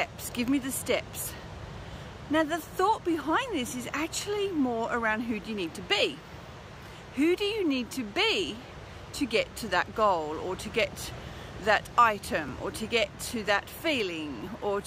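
Near the end, from 12.49 s to 14.47 s, periodic USB or driver dropouts appear: something stalls the USB bus or audio driver about once every second, and each time a few milliseconds of audio are skipped outright rather than filled with silence. Roughly three losses occur, each around 2 ms long, so the sound jumps forward abruptly and produces short, evenly spaced ticks about 1.0 s apart, heard only because signal is present.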